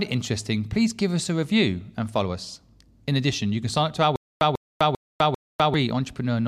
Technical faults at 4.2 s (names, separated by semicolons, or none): stutter with silent gaps